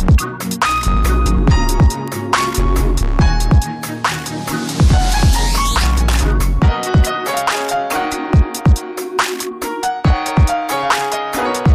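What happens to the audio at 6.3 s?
Nothing goes wrong at 6.3 s; the audio carries on intact through that moment with no dropout, click, glitch or other fault to be heard.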